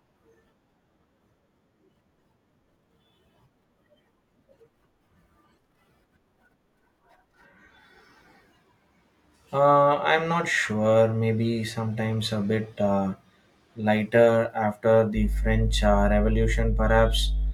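A ground loop or nearby transformer lets the 50 Hz power line leak into the signal from 15.14 s, just after "lighter after", until the end at 17.53 s. This mains hum is a steady low drone, roughly as loud as the speech itself.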